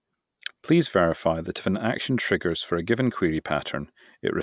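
No technical faults are audible.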